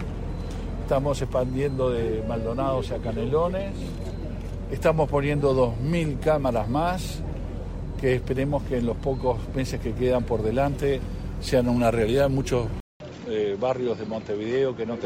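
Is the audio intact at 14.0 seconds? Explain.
No. From 12.80 s to the end of the clip, the sound has the character of an input switched to a poorer device, likely a change of microphone or a fall to a headset's call profile. After a gap of about 200 ms at the switch, the audio comes back duller and boxier, with nothing above 7.6 kHz, roughly 5 dB quieter, and with a new, faint background noise underneath. At 14.0 s this narrower, altered capture is what is heard.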